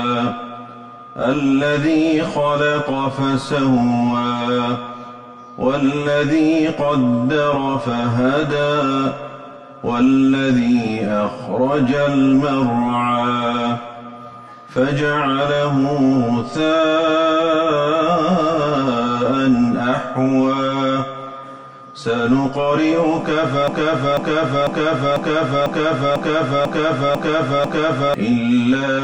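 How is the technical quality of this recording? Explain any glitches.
A broken-record loop takes over from 23.68 s to 28.14 s. The same 0.5-second fragment plays nine times back to back, and the audio that belonged in that stretch never arrives. The likely cause is a stalled player, encoder or stream resending its last buffered piece.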